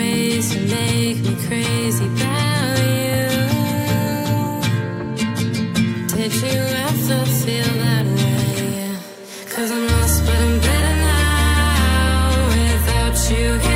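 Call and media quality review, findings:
USB whine, 9.53 to 11.81 s. Fixed-pitch tone on a 1 kHz series, strongest at 4 kHz, roughly 20 dB under the signal. USB frame-rate current leaking through power or ground.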